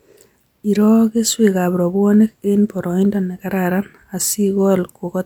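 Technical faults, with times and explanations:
No technical faults are audible; the speech signal stays continuous and intact throughout.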